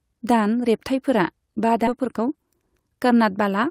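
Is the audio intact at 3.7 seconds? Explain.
Yes, the speech is intact at 3.7 seconds, with no fault at that moment.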